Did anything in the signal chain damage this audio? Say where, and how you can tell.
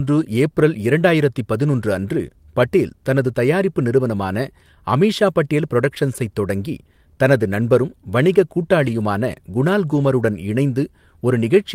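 Yes. There is a lost packet rebuilt from error correction, at the network stage, from 8.83 to 9.01 s just after "தொடங்கி தனது நண்பரும் வணிக" and again at 9.91 to 10.05 s. Neither leaves a gap, but both sound rougher and noisier, because the decoder played low-bitrate copies carried in the following packets.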